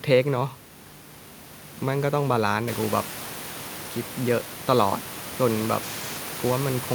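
This is a speech clip, and nothing is technically wrong with it; the room's background noise grows louder a little way in but stays below the speech.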